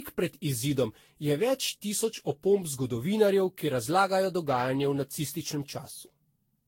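A speech clip with generation loss all the way through: swirly, hollow and smeared, with soft attacks and nothing above 16.6 kHz, likely from around ten passes through a lossy codec like Vorbis near 64 kbit/s.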